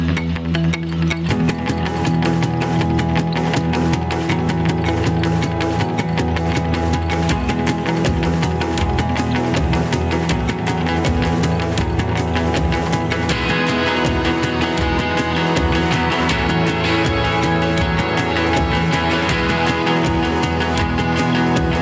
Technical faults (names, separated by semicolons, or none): gain pumping